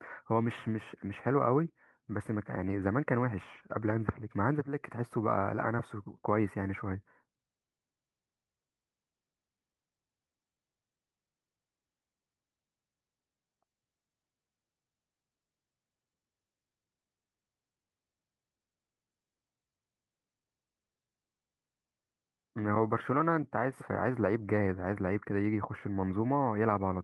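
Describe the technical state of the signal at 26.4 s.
At 26.4 s the speech is intact, carrying only the ordinary coding character of the Opus call path and no fault.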